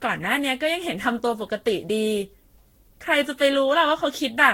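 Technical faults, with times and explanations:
Throughout, generation loss: the speech sounds swirly, smeared and hollow, with blurred attacks and nothing above 16.7 kHz, worse than one pass at this quality would give. This fits lossy re-encoding around ten times, likely Vorbis near 60 kbit/s, with quantisation errors stacking each pass.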